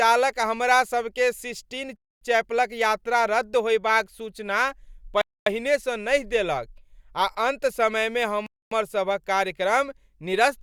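At 1.96 s, 5.21 s and 8.46 s the speech stops for 250 ms each time. These are gaps between chunks. The audio arrives in 3-second pieces, and silence sits between them. Nothing is lost, but every join becomes a hole.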